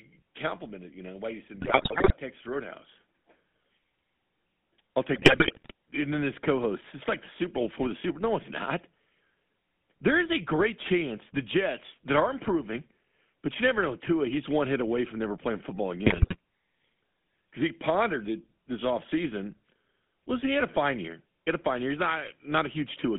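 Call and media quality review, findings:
GSM full-rate codec, whole clip: buzzy, gravelly speech, band limited to about 150 Hz to 3.6 kHz, consistent with a 13 kbps GSM full-rate encode. Pulse-driven vocal-tract model with decimated excitation; plainly audible roughness and no high end.

GSM bit errors, three bursts: 1.60 to 2.13 s after "do you", 5.14 to 5.72 s before "and then this", 16.06 to 16.36 s after "from never playing football". Squawks, pops and gargling. Corrupted filter, pitch and gain parameters reach the decoder, distorting spectrum and level frame by frame.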